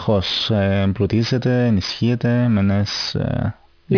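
Aliasing runs through the whole speech clip. Energy above 5.5 kHz folds back below it, which fits a drop to roughly 11 kHz sampling without a filter first. Sibilants turn gritty and metallic, the folded tones sitting about 15 dB under the speech. Plain band-limiting would only dull them.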